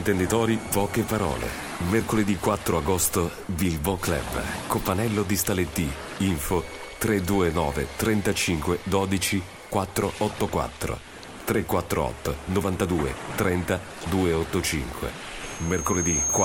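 At 15.43 s a loudspeaker feedback squeal begins and runs to the end at 16.44 s. A microphone is hearing its own loudspeaker, and at 6.4 kHz the loop gain passes unity, so that one tone swells within under a second into a piercing whistle several decibels above the surrounding sound.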